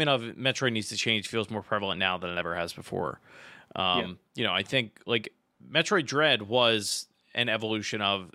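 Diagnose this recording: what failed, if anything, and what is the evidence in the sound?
Nothing stood out on listening to this speech recording; no stage in the chain shows audible evidence of failure.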